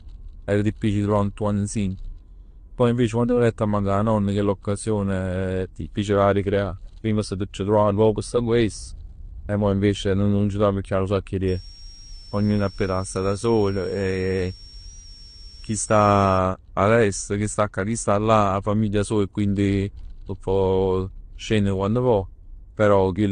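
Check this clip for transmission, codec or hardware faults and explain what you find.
Two faults are audible: a layered codec sound across the whole clip, and a high whistle for about five seconds in the middle.

Throughout the speech, nothing is present above 9.8 kHz, and the artefacts come in two overlapping flavours. This is most likely transcoding between lossy codecs, with a low-rate AAC-LC encode, around 32 kbit/s, later re-encoded as Vorbis at about 55 kbit/s. The second encoder spends its bits reproducing the first one's artefacts and adds its own, while the lowest band limit in the chain survives. A single low-bitrate encode would show one consistent artefact character. Here two distinct kinds are stacked.

From 11.48 s to 16.38 s, between "nu sacc 'e" and "a l'est chi sta", a switching supply whistle sits well below the speech, roughly 25 dB down. It wanders between 5.32 and 5.70 kHz. 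A power converter running in an audible burst mode, or beating against another converter, produces this tone, and its pitch shifts as the load changes. That wandering pitch sets it apart from mains hum or a fixed digital tone, which hold a single steady frequency.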